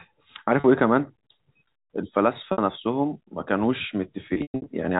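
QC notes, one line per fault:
0.60 to 0.64 s, packet loss with pitch repetition: a 40 ms gap (consistent with two 20 ms packets) was bridged by repeating the last pitch period, so the sound briefly holds on a slightly buzzy, frozen tone.
2.52 to 2.58 s, packet loss with pitch repetition: a 60 ms gap, concealed the same way, gives a longer held buzz.
4.34 to 4.66 s, packet loss with pitch repetition: 240 ms of losses scattered over 320 ms, longest run 120 ms. The repeated period fades toward silence within that run before the sound cross-fades back, giving a stuttering, choppy ending heard through the 4 kHz-limited G.711 telephone band.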